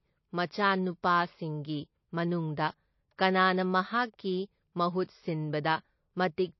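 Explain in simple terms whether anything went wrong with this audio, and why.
The recording was likely squeezed hard by MP3 compression, which ran short of data and threw away detail. Nothing above about 5.8 kHz survives, so the speech sounds dull and muffled, with a watery, swirling quality that is plainly audible all the way through.

Pre-echo appears between 0.46 and 0.51 s. The compression spreads its noise across a whole chunk of sound, so a sudden loud moment leaks backwards. About 50 ms of hiss arrives just before that attack, which then sounds soft and smeared.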